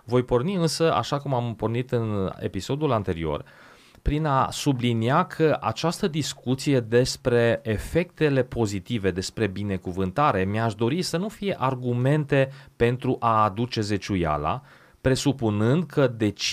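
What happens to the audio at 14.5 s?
Nothing goes wrong at 14.5 s; the speech carries on intact through that moment, with no dropout, click or distortion to be heard.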